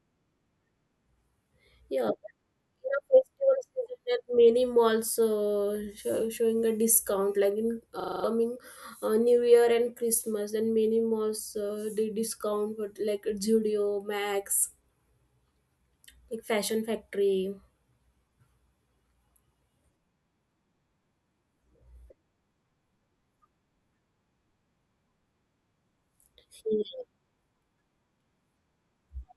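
A system hang loop at 8.0–8.24 s: the machine froze while hardware replayed one 40 ms buffer six times, producing a 25 Hz stuttering buzz.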